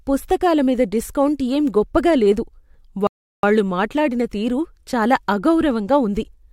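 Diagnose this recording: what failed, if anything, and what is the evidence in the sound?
The failure is a rebuffering stall at the playback stage. The speech stops dead at 3.07 s and holds silence until 3.43 s. It then resumes on "మాట్లాడిన తీరు చాలా" exactly where it broke off. Nothing is skipped. The player's buffer ran dry, and waiting for more data added about 0.36 s.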